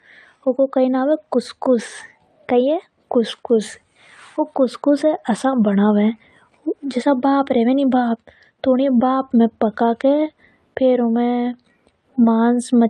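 No technical faults can be heard anywhere in the recording.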